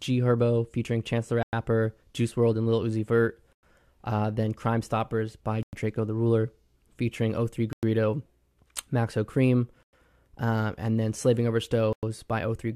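Hard-edged 100 ms silences cut the speech at 1.43, 3.53, 5.63, 7.73, 9.83 (just before "um and then") and 11.93 s: a gap between chunks, where silence is inserted at each 2-second join.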